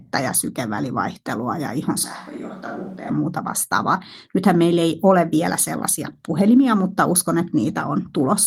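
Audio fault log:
2.04–3.10 s, switch to a distant microphone: just after "ja sykevälivaihtelua ja ihon" the speech abruptly turns roomy and hollow, thinner in the bass and about 5 dB quieter, with room noise rising to roughly 30 dB below the speech. The close microphone's signal has likely dropped out, leaving a pickup further away that captures more reflections and ambience. The close sound returns just as abruptly at "muuta vastaavaa", with the light Opus hybrid coding at 24 kbps present across both sections.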